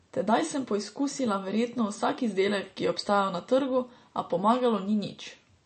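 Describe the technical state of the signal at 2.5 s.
At 2.5 s the speech sounds dull and watery, with a swirling, unstable texture and smeared consonant onsets, as it does throughout the clip. Nothing is present above about 8.3 kHz. The likely cause is MP3 compression at a low bitrate, one that fits roughly 34 kbps: the encoder cuts the treble at that fixed point and zeroes weaker frequency lines that flicker on and off between frames.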